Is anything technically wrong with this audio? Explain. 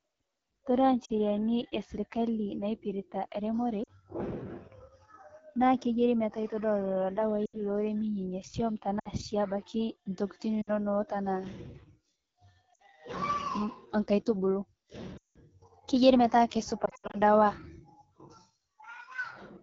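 Yes. The speech has codec damage throughout and repeated dropouts.

AMR wideband (HD Voice) codec: The whole clip sounds rough and raspy. That fits the low 8.85 kbit/s mode. Its pulse-driven vocal tract model runs short of bits.

Lost AMR speech frames: Dropouts occur at 1.05 s (40 ms), 3.84 s (40 ms), 7.46 s (80 ms), 8.99 s (60 ms, just before "si abaki"), 10.61 s (60 ms), 12.74 s (60 ms), 15.18 s (180 ms, just before "keyiari metaa") and 16.85 s, just after "keyiari metaa." That last one is 160 ms lost, scattered over 280 ms. The decoder repeats the last good settings with falling gain. Short losses give dips or warbles. Longer ones drop to near silence, then recover weakly.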